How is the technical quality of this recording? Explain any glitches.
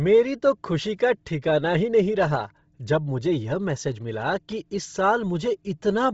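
The technical quality is poor, with heavy codec damage running through the whole speech clip. Throughout, nothing sounds above about 7.7 kHz, and the upper band has a breathy, grainy texture. That points to Bluetooth LC3 compression, the LE Audio codec, likely at a low rate such as 24 kbps. At that rate the encoder zeroes much of the upper spectrum and fills it with noise. The frames are short, consistent with 7.5 ms. Unlike a simple low-pass filter, the remaining top end hisses rather than falling cleanly silent.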